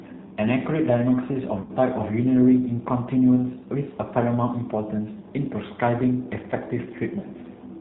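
The whole clip carries G.729 codec damage, with speech sounding slightly rough and synthetic, capped near 4 kHz, which fits an 8 kbit/s stream. From 1.61 to 1.72 s, VoIP packet loss concealed by the speech codec: about 70 ms of frames went missing over 80 ms, the longest gap 40 ms. The decoder stretches the last sound into a fading buzz or coloured noise, and the voice stays weak briefly afterwards.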